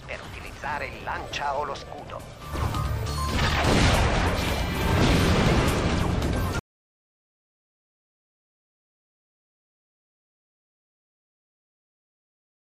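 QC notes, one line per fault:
6.59 s to end: audio dropout to silence. The sound cuts off abruptly mid-flow and never returns. The final 6.2 s is silence with no room tone, likely because the input was lost while the recorder kept writing silence.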